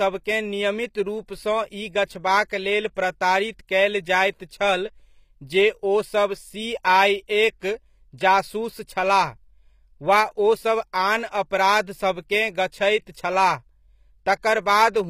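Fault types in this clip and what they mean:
HE-AAC compression: treble above the coded band is rebuilt by copying lower bands upward, likely from a low-bitrate HE-AAC v2 encode; sibilants sound gritty, nothing above 15.5 kHz.
Pre-echo: at 7.6 s a short hiss of about 17 ms arrives just before a sharp attack, as block-wide quantisation noise leaks ahead and softens the onset.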